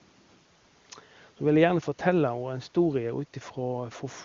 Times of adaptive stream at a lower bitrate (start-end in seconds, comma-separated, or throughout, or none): none